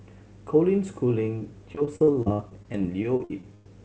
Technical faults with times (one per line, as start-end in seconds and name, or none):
1.39-3.66 repeated packet loss (robotic sound)